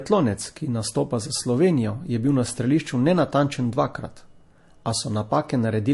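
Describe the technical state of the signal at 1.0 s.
At 1.0 s the speech has nothing above 11.3 kHz, and two layers of different codec artefacts heard together, as it does across the whole clip. The likely cause is transcoding between lossy codecs: a Vorbis encode re-encoded as MP3, which points to roughly 48 kbit/s. The second pass spent its bits on the first codec's artefacts and kept the lowest cut-off.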